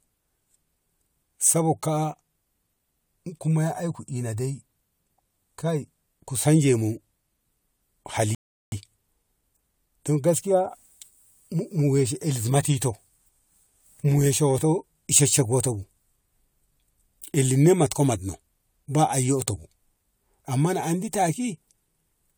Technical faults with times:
8.35-8.72 rebuffering stall

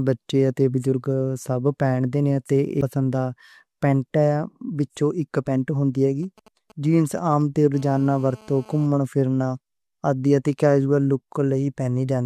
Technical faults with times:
2.81 damaged data in a compressed stream
6.23-7.66 GSM signalling bursts
7.74-8.87 GSM phone buzz

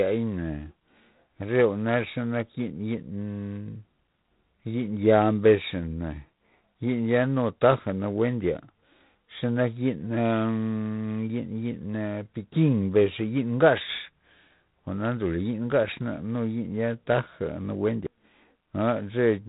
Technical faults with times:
0.00-19.48 G.726 ADPCM

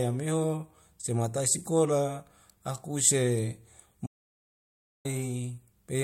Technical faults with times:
4.06-5.05 audio dropout to silence

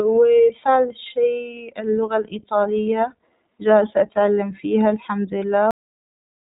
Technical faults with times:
0.00-6.56 iLBC codec
5.71-6.56 cut-off end

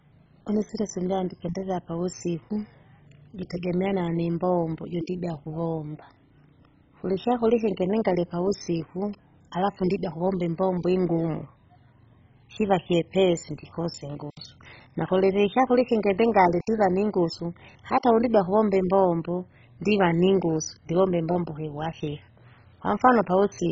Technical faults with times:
0.00-23.71 MP2 compression

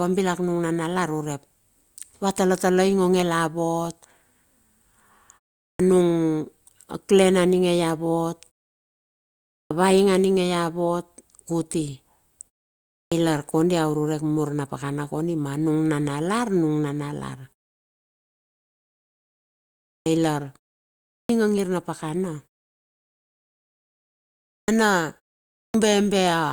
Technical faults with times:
5.70-5.79 clipped start after a pause
9.61-9.71 clipped start after a pause
13.02-13.12 clipped start after a pause
19.96-20.06 clipped start after a pause
21.18-21.29 clipped start after a pause
24.58-24.68 clipped start after a pause
25.63-25.74 clipped start after a pause

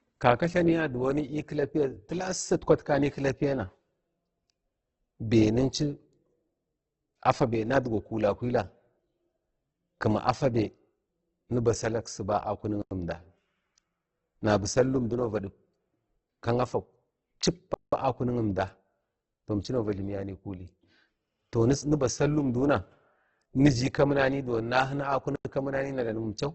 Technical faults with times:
0.00-26.55 Opus compression
12.82-12.91 block of digital silence
17.74-17.93 block of digital silence
25.36-25.45 block of digital silence

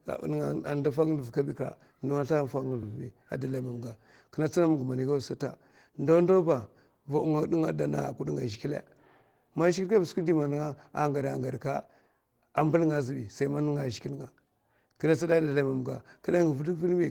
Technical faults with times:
0.00-17.11 Opus voice compression

